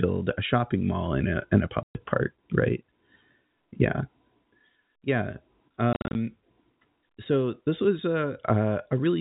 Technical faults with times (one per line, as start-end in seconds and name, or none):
1.83-1.95 packet loss filled with silence
5.93-6.15 packet loss filled with silence